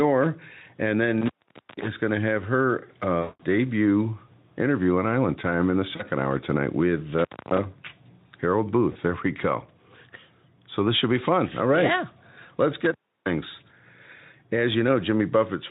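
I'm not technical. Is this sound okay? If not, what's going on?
No, it has three separate problems.

Gain pumping runs through the whole recording. The likely cause is that the microphone level was set far too high and an automatic level control keeps pulling it down on every loud syllable. That makes loud and quiet parts sound squashed together.

Intermittent contact happens three times: from 1.18 to 1.88 s, just before "going to have her", at 7.18 to 7.58 s, right after "hour tonight with", and at 12.85 to 13.33 s. Each time the sound drops out for between about a quarter and half a second, with a crackle where it cuts and returns. That is what a loose cable or plug sounds like when it briefly loses connection.

VoIP packet loss concealed by the speech codec appears at 3.22 to 3.41 s, between "going to have her" and "debut interview on", and more briefly at 5.95 to 6.03 s and 8.91 to 8.97 s. 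Pieces of the internet call went missing, about 0.18 s in the first case and 0.04 s in the others. The receiving software filled each gap by stretching the last bit of voice into a fading sound, and the voice stays weak or distorted for a moment after the connection recovers.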